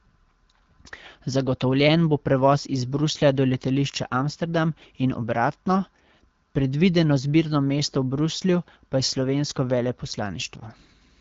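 Nothing technically wrong can be heard in this speech recording. It carries the character of the AMR wideband (HD Voice) codec at 12.65 kbit/s, with speech band-limited to about 7 kHz and only light coding texture.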